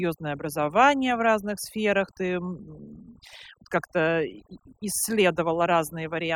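From start to finish the speech has been through overdone noise removal: a noise reduction stage set far too aggressively, muting individual frequency bands whenever their level came close to its noise estimate. Because the quieter components of the voice sit near that threshold, they are stripped out along with the noise. The background drops and is broken by twinkling, chirpy specks.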